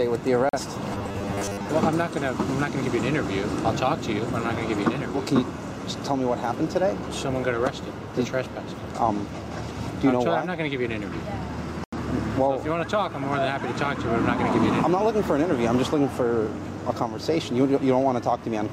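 A brief hole in the sound opens from 0.49 to 0.59 s, and a longer one from 11.84 to 11.98 s. These are digital broadcast dropouts: the receiver muted when frames were lost or failed their check. About 43 ms went missing first, then about 85 ms, which fits one lost frame and then two.

From 0.93 to 1.69 s the sound turns into a rigid, metallic buzz at 100 Hz. This is robotic sound from repeated short buffers, likely caused by new audio arriving too slowly so that a 10 ms slice is looped, with about half the real audio skipped.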